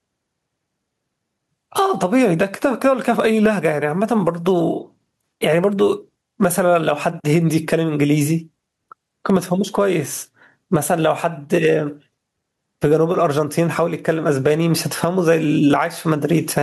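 The input gain is likely set far too high, so a fast limiter clamps down on every loud syllable throughout the speech, producing gain pumping: the gain swings around 15 dB, leaving the delivery flattened and squashed.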